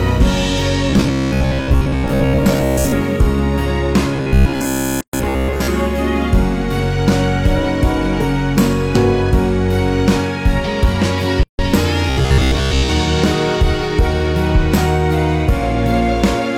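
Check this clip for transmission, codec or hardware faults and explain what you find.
Two kinds of fault appear: a repeated-buffer robotic effect in three stretches and two silent gaps at joins between separately encoded pieces.

Robotic sound from repeated short buffers, 0.90 to 2.92 s, 4.16 to 5.69 s and 12.10 to 12.89 s: new audio was likely arriving too seldom, so playback kept looping the last short buffer, most of the time, while real material was skipped. The loop length fits a buffer of about 15 ms, which stamps a fixed 66.7 Hz buzz onto the sound. In each stretch the sound turns rigid and metallic, still loosely following its original contour.

Gap at a join of encoded pieces, 5.01 to 5.13 s and 11.43 to 11.59 s: the audio was encoded as separate pieces and joined without trimming each encoder's start-up delay and final-frame padding. That leftover silence opens as holes of 126.6 ms and 156.8 ms, with smeared edges. 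The first falls inside the second robotic stretch. After each gap the sound resumes exactly where it stopped.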